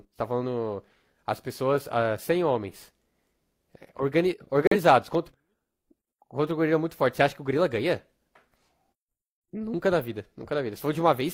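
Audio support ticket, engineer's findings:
Corrupt frame muted, 4.66 to 4.76 s: abrupt dropout of about 0.11 s, consistent with two codec frames of roughly 50 ms. Decoder rejected damaged compressed frames; player substituted silence. Waveform shows flat silent gap with sharp edges. Spectrogram shows a clean full-band vertical blank stripe. Timing preserved.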